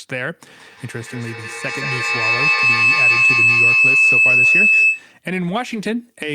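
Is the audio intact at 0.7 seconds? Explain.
No, not really. At 0.7 seconds you're inside a feedback howl that runs from 0.48 to 5.15 s. What's happening is that two devices in the same room are both on the call, so the sound loops from microphone to loudspeaker and back, gaining level each trip. It narrows to a whine somewhere around 3 kHz, with the loop repeating roughly every 150 ms, and peaks at about 10 dB above the speech.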